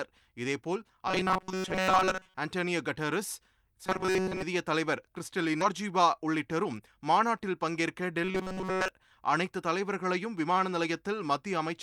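It's a speech clip, and three kinds of fault show up. From 1.07 to 2.37 s, 3.85 to 4.43 s and 8.24 to 8.88 s there's robotic sound from repeated short buffers: a rigid metallic buzz at 188 Hz. That's likely the player looping a chunk of about 5.3 ms because new audio isn't arriving. Most of the sound is repeated in the first two stretches, and all of it in the last one. At 5.61 s there's a skip ahead. Roughly 0.7 s of audio is just gone, and the two sides are butted together with no gap filled. Then from 6.20 to 6.80 s a jitter buffer speed-up kicks in. The receiver trims short pitch-period slices to shed about 50 ms of backlog, so the speech runs at 107% speed with the pitch unchanged and sounds a bit rushed.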